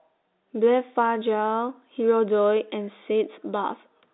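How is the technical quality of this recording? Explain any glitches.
No glitches or faults heard.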